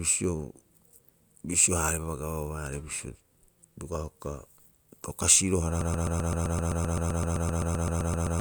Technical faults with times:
5.81-8.40 broken-record loop

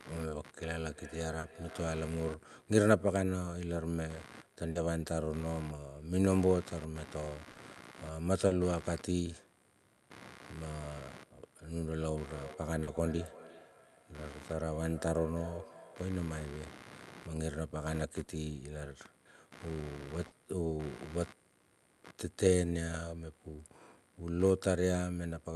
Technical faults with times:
0.00-25.55 computer activity noise
0.57-2.31 feedback echo between two devices
1.39-1.46 short concealed packet loss
4.71-4.78 short concealed packet loss
7.51-7.58 short concealed packet loss
8.47-8.54 short concealed packet loss
12.20-16.26 feedback echo between two devices
12.83-12.90 short concealed packet loss
18.23-18.30 short concealed packet loss
20.27-20.34 short concealed packet loss

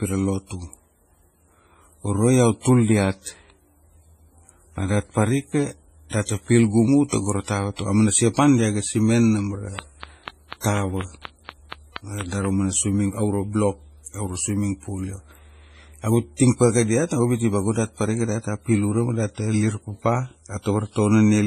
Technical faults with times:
0.00-21.47 transcoding between lossy codecs
9.79-12.46 train of clicks

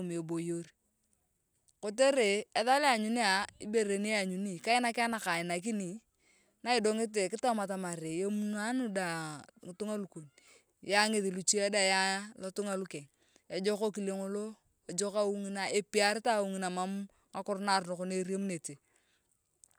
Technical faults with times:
none

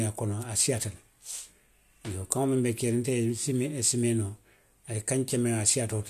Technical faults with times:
none

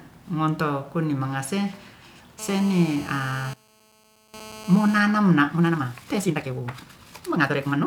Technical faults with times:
2.39-4.99 GSM phone buzz
3.54-4.34 one channel inverted
5.45-7.86 time-stretched section

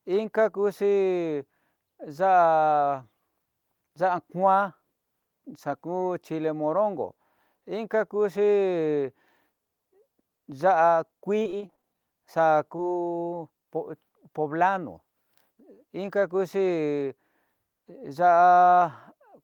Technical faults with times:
11.39-11.96 repeated packet loss (robotic sound)
12.76-12.80 short concealed packet loss

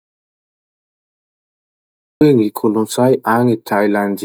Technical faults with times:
0.00-2.21 audio dropout to silence

